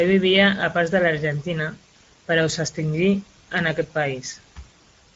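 Across the whole speech clip the voice sounds noisy and hoarse, with the coarse, grainy texture of Speex codec damage, and nothing is present above 7.6 kHz. The character fits a mid-range Speex wideband setting around 17 kbps, which leaves too few bits to code the excitation cleanly.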